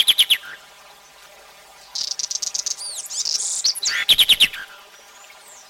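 From start to finish, the audio has the signature of planar audio read as interleaved. Each 10 ms block stores all its left-channel samples and then all its right-channel samples. The player instead takes them as alternating left-right pairs. So each block plays twice at double speed, once from each channel, and the overall pace holds. Because the blocks are so short, there is no clear octave jump. What you hear is a robotic buzz at the block rate of 100 Hz.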